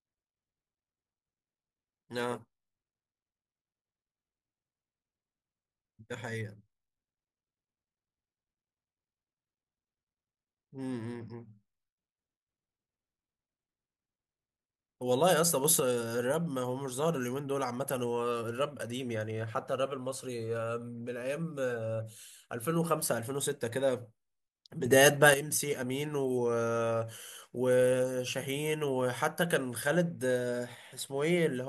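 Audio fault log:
15.64–15.8 s and 24.86–25.34 s, sudden gain jump: the digital gain was likely switched in one step rather than ramped, raising the level by about 6 dB at the first point and about 9 dB at the second. The speech and the background noise rise together instantly, and the step may bring a click at the edge. The larger second step stands out more.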